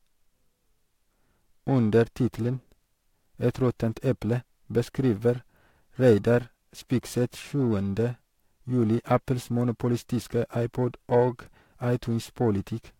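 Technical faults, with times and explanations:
Throughout, periodic clock jitter: a tone near 1 kHz is wobbling the converter's sampling clock, so every component of the speech carries sidebands about 1 kHz above and below it, strongest on higher frequencies. The result is a rough, metallic edge that stops in silences.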